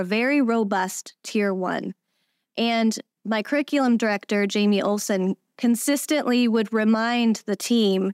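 No technical faults can be heard anywhere in the speech.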